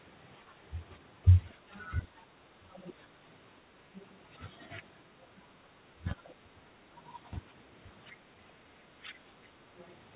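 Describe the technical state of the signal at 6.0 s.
At 6.0 s the speech falls within a stretch of likely speech suppressed in double talk. From 5.29 to 6.66 s the echo canceller turns it down, by around 30 dB at its deepest.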